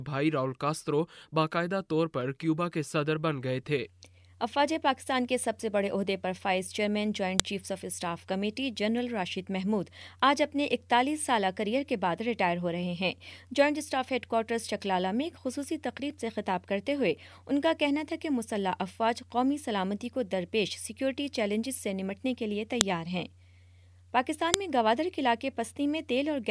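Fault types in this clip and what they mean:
File header played as audio: sharp, loud snaps at 7.40, 22.81 and 24.54 s, each lasting only a millisecond or so, where a new piece of audio was joined on without its WAV header being stripped, so those few dozen bytes of file metadata play back as sample values. Unlike a dropout or splice click caused by a waveform discontinuity, the snap lands exactly at each join and stays just as loud regardless of what the surrounding sound is doing.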